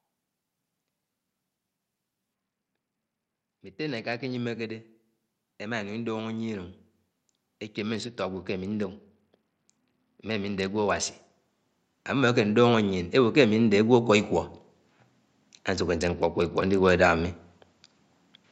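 From 2.34 to 4.35 s, 7.77 to 11.3 s and 15.98 to 16.9 s the speech turns dull and gritty. This is a Bluetooth SBC bit pool drop: a congested link starved the upper sub-bands, which fits the bit pool falling from 31 to about 9, near 72 kbps. Unlike a simple low-pass filter, it adds grit as well as dullness.

From 12.07 to 14.33 s, automatic gain rising lifts the speech and background together by about 6 dB. It is a slow swell over two seconds rather than a sudden step.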